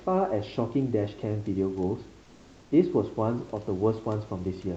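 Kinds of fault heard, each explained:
Nothing stood out as a fault on listening to this speech.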